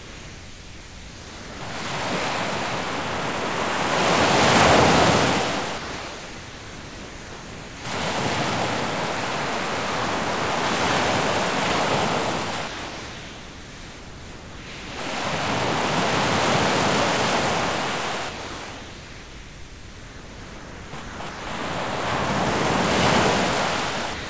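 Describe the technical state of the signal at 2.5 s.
At 2.5 s the signal is intact, with no dropout, glitch or distortion; the sound carries the steady band limit of a wideband call path, with nothing above about 8 kHz.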